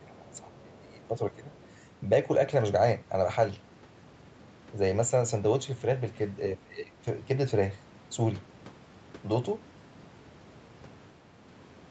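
From the start to 1.53 s, the speech is pulled down hard, by about 20 dB at its deepest. This is speech suppressed in double talk. The likely cause is an echo canceller that heard both sides at once. It could not tell the talker from the loudspeaker echo, so it turned everything down. The voice sounds sunken and patchy for about a second and a half.

At 1.62 s, a faint second voice slips in for about 90 ms. This is the other side's voice leaking through. It likely comes from loudspeaker sound the echo canceller failed to fully remove from the microphone. The scrap sits far below the speech, around 30 dB down. It is brief and quiet.

From 6.55 to 7.0 s, the speech is suppressed in double talk again. Once more the level drops by about 20 dB. This time it lasts about half a second. The voice dips and thins, then recovers. Throughout, the call path band-limits the audio, with nothing above 8 kHz.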